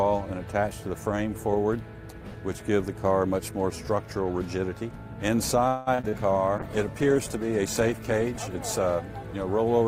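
From 5.67 to 6.14 s there is repeated packet loss, giving a robotic sound. Several gaps were patched by stretching earlier audio, so it turns choppy. From 6.59 s to the end, a call bitrate drop makes the sound rough and muffled. It fits a fall from about 48 to 14 kbps, staying lowest for about 1.97 s.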